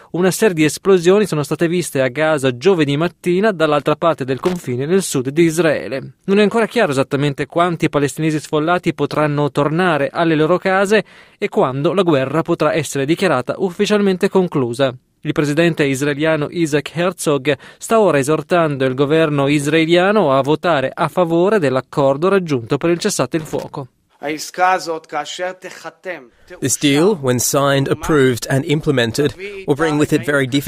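At 4.39 s a short, irregular burst of crackle and scratching cuts across the sound for about 0.14 s, and at 23.39 s a similar, longer burst runs for about 0.28 s. Both are loose connector crackle: a worn or dirty contact in the signal path is shifting, so the connection rapidly makes and breaks. Each break chops the audio into fragments, and any DC sitting on the line turns those interruptions into sharp pops.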